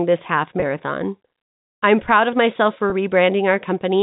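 At 0.60 to 0.62 s and again at 2.90 to 2.92 s there is packet loss with pitch repetition. Each gap is 20 ms, which fits one lost packet. The receiver bridges it by repeating the last pitch period, so it sounds like a brief, slightly buzzy hold.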